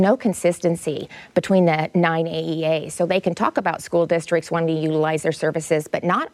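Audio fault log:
No audible faults detected.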